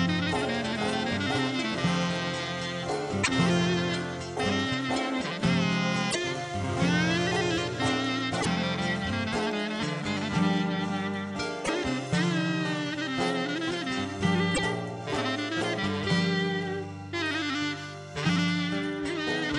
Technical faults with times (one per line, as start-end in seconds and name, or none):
3.20-3.28 damaged data in a compressed stream
6.07-6.16 damaged data in a compressed stream
8.37-8.47 damaged data in a compressed stream
11.61-11.69 damaged data in a compressed stream
14.51-14.60 damaged data in a compressed stream